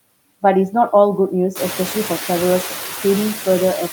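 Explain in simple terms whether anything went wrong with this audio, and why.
Noise suppressor artifacts run through the whole speech clip. The cleanup filter pushes steady background noise down hard between words. It lets it back under speech. The room's own noise grows louder at about one and a half seconds.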